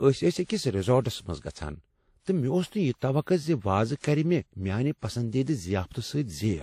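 Transcoding between lossy codecs runs through the whole speech clip. Nothing sounds above 16.5 kHz, and two kinds of coding smear overlap. This likely comes from a WMA encode near 48 kbit/s re-encoded as Vorbis near 53 kbit/s, the second codec wasting bits on the first codec's artefacts.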